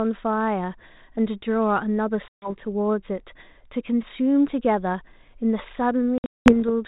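A speech recording over a narrowband G.726 ADPCM link, with light coding damage at 32 kbit/s, drops out twice: a 140 ms hard-edged gap at 2.28 to 2.5 s, and at 6.18 to 6.53 s a scattered loss of about 260 ms whose longest hole runs 200 ms. Each time the sound returns briefly and slightly distorted, which is packet loss on an ADPCM call: about 7 and then about 15 packets went missing, and the decoder's predictor and step size had to resynchronise afterwards.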